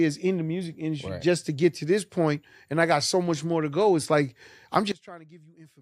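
A sudden gain jump at 4.92 s drops the speech and background noise together by about 24 dB, likely from a gain setting applied instantly without any ramp.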